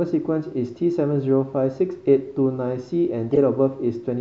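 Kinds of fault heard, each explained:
Corrupt frame decoded: damaged compressed data was played instead of being concealed, so misplaced energy bursts out as a chirp, squeak or burst of noise peaking around -5 dBFS from 3.32 to 3.38 s, spanning what sounds like a few frames, unlike dropouts, which mute or smear the speech.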